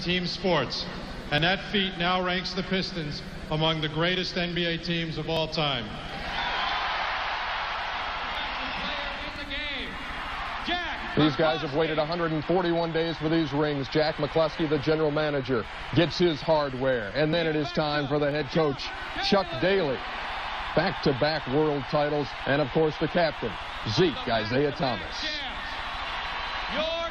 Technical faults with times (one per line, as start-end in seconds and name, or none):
1.38 overlap between stream segments
5.37 overlap between stream segments
8.35 overlap between stream segments
9.36 overlap between stream segments
10.35 overlap between stream segments
14.34 overlap between stream segments
17.33 overlap between stream segments
18.31 overlap between stream segments